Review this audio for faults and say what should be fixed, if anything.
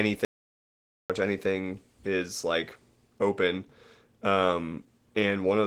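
Opus voice compression runs through the whole speech clip at 16 kbps in hybrid mode, with SILK carrying the lower band and a CELT layer above it. The coarse excitation coding leaves the voice plainly hoarse, muffled and slightly robotic. Encoding at 24 to 32 kbps or higher would prevent this.

An audio dropout to silence runs from 0.25 s to 1.10 s, removing about 0.85 s. The sound cuts to silence with no room tone, so the input was likely lost through a device or link failure while recording continued. Monitoring input levels and connections during capture would catch this.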